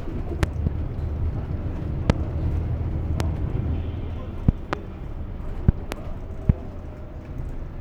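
Loud pops strike at 0.43–0.69 s, 2.10–2.12 s, 3.20–3.23 s, 4.49–4.75 s, 5.69–5.95 s and 6.50–6.52 s. Some come as doubles. Each jumps about 25 dB above the sound, likely from electrical voltage spikes.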